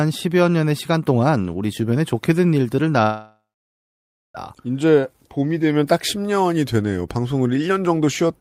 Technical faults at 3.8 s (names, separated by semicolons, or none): long network dropout